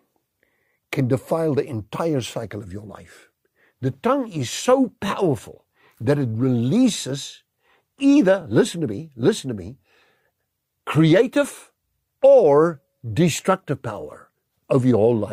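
Speech with three brief repeated-frames stutters, at 5.07–5.10 s, 8.41–8.43 s and 14.01–14.03 s. Each time a 20 ms slice plays twice, which fits a single compressed frame decoded again, lengthening the audio by 20 ms. Unlike a dropout, nothing is lost.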